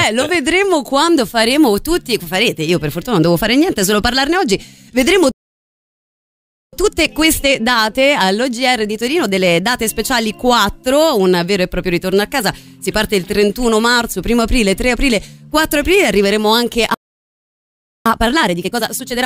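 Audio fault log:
5.31–6.73 s, playback stall: the sound cuts out mid-flow and stays silent for about 1.41 s before picking up again. The gap is a clean dropout, likely the player running out of buffered data or having its output thread blocked until it recovered.
6.73–9.73 s, time-compressed catch-up: for three seconds the audio runs slightly hurried, at about 1.1 times normal speed, with unchanged pitch. The player is shrinking the backlog from the stall by removing small slices and cross-fading across the joins.
16.94–18.06 s, playback stall: a second mid-flow silence, about 1.11 s long, with the sound then resuming. It has the same character as the first gap and the same likely cause, a starved buffer or a stalled playback thread.
18.06 s to the end, time-compressed catch-up: the audio rushes noticeably at about 1.5 times normal speed, still at its normal pitch. The heavier compression means more audio is cut out and cross-faded.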